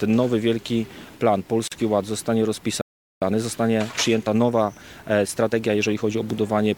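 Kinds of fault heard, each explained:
Gap at a join of encoded pieces: At 1.68 s there's a dropout of about 40 ms, running to 1.72 s, right in the middle of continuous sound. It's what you get when separately encoded chunks are butted together without trimming. The encoder's start-up delay and the padding on the final frame both survive as silence. The codec softens the edges of the hole, so the truly silent stretch is a bit shorter than that, and then the audio picks up exactly where it left off.
Playback stall: From 2.81 s to 3.22 s the output just goes quiet for about 0.40 s, cutting off mid-flow. That's most likely the player running dry on data or having its thread blocked, so it had nothing to send out until it recovered. Then it resumes with no obvious jump, which lines up with what happens straight after it: the player working off the backlog it built up.
Time-compressed catch-up: Right after the stall, from 3.22 s to 6.22 s, everything runs at about 1.1 times normal speed while the pitch stays put. 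The player is trimming its backlog by cutting out tiny slices and cross-fading over the joins rather than speeding up the whole signal. So you hear the audio hurried along for those three seconds without it going chipmunky.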